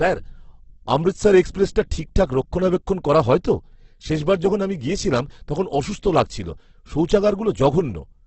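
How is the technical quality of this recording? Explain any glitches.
The speech is heavily degraded by codec damage for its whole length. A starved encoder, likely Opus compression at what sounds like about 12 kb/s, fills bands with noise, leaving speech rough, grainy and empty above 8.2 kHz.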